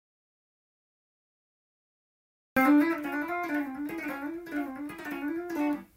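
From the very start until 2.57 s the clip sits in silence, an audio dropout to silence already under way, likely from a lost input while recording continued. The waveform is flat and the spectrogram completely blank, with no room tone, until sound abruptly resumes.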